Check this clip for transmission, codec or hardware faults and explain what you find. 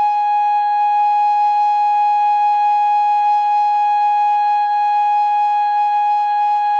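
Nothing stood out on listening to this music clip that would point to a transmission, codec or hardware problem.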